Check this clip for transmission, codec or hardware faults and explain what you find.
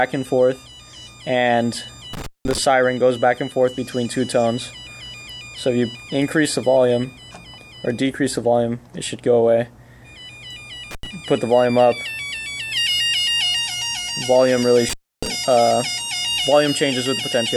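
There is one hardware fault, recurring three times. Intermittent contact at 2.13–2.58 s, 10.91–11.07 s and 14.89–15.27 s: a loose cable or plug briefly breaks the signal path, dropping the sound for about 188, 84 and 292 ms, with crackle at each edge and faint hiss through the gaps.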